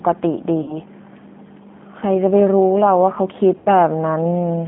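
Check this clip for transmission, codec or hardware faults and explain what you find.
Two faults are present: a G.729 codec coloring the whole clip, and two dropouts patched by the codec's packet loss concealment.

G.729 codec, throughout: the speech is squeezed into a telephone band of roughly 150 Hz to 3.5 kHz. Each 10 ms frame is rebuilt from a vocal tract filter, a pitch predictor and a few pulses rather than the real waveform, which points to an 8 kbit/s G.729A link. The damage is plainly audible: speech stays intelligible but sounds rough, thin and faintly synthetic.

VoIP packet loss concealed by the speech codec, at 0.62 to 0.77 s and 3.58 to 3.68 s: about 60 ms of audio goes missing in the first gap and about 80 ms in the second, which fits three and then four 20 ms packets. With no new data, the decoder keeps replaying its last pitch and filter at falling gain. The sound smears into a buzzy tone or coloured noise that fades. 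Because each frame builds on the previous one, it stays weak for a short while after the stream resumes.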